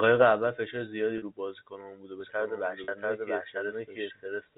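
At 1.18 to 1.22 s, packet loss with pitch repetition leaves a 40 ms gap, which fits two lost packets. The receiver fills it by repeating the last pitch period. The result is a brief held, buzzy tone. The same 40 ms fault returns at 2.84 to 2.88 s, inside the doubled section, with the same short buzz.

From 2.20 s to the end, a doubled audio track appears. The likely cause is a second capture on a slower path, mixing a full-band copy back in about 0.7 s late at roughly equal level. It starts abruptly, sounds dry with no room decay, and makes the speech sound layered over itself. Through all of this, the narrow telephone band of the G.711 coding stays audible.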